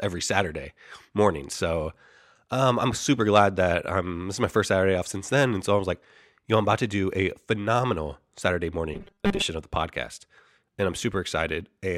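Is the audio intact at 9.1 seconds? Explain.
No. From 8.94 to 9.42 s there is robotic sound from repeated short buffers: a rigid, metallic 200 Hz buzz, likely from a 5 ms chunk replayed while most of the real audio is skipped. A spectrogram shows flat, evenly spaced 200 Hz harmonics, and the waveform shows identical repeating cycles.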